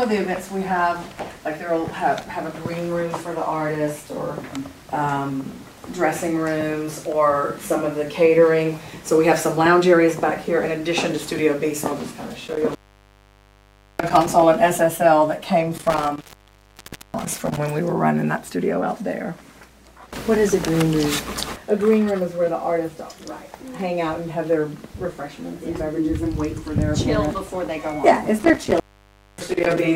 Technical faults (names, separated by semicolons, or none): intermittent contact